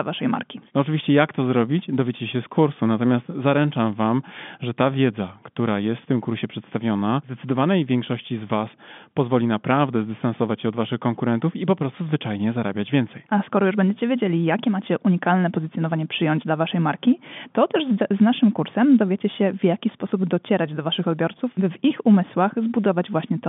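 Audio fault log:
No faults heard anywhere in the speech.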